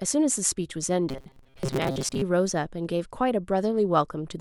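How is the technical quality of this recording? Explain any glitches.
The recording has one audible glitch, a robotic sound from repeated short buffers between 1.09 and 2.22 s. About half the audio is likely replaced by repeats of a roughly 7.5 ms buffer, forcing a metallic 134 Hz buzz that shows as flat, evenly spaced harmonic lines on a spectrogram and identical repeating blocks in the waveform.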